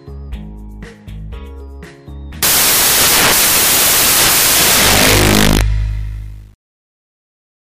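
From 2.43 s to the end, the sound gives way to loud, harsh broadband noise, close to white on the louder passages. This is samples built from the wrong bytes: the bytes of each sample were assembled incorrectly, whether shifted by one byte, taken in reversed order or read at the wrong alignment. The rapidly fluctuating low-order bits then land in the most significant position, so each value becomes essentially random noise.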